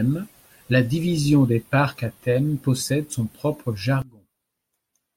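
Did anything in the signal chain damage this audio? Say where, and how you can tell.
Yes. At 4.02 s a sudden gain jump cuts speech and background noise together by about 24 dB, likely an unramped digital gain setting.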